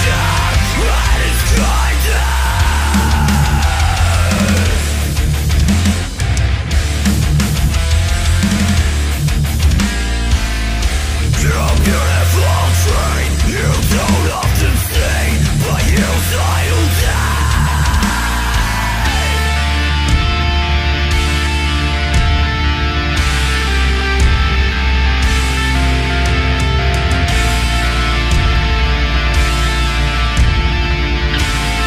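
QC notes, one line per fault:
No faults found in this clip.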